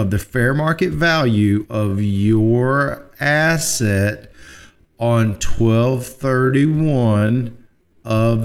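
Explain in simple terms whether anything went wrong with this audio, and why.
Software likely stretched the audio to fill a set length, keeping the pitch by repeating short pieces. From 1.69 s, right after "the fair market value", until the end, this time-stretched section plays at about 0.56 times normal pace, so the speech suddenly drags while the pitch stays the same.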